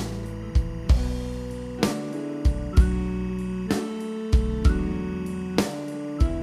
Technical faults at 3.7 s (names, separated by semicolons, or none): timecode bleed